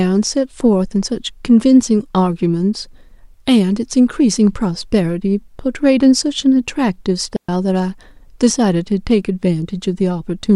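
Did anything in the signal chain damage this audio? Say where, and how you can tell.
Yes. The damage happens on the digital wireless link between microphone and receiver: a digital wireless dropout from 7.36 to 7.49 s, where the speech drops to near silence for about 120 ms. The receiver lost too much of the radio data stream and muted its output with a very short fade rather than play corrupt audio. An analogue wireless dropout would usually bring a burst of hiss or noise at the edges, but this hole is clean, with no noise on either side.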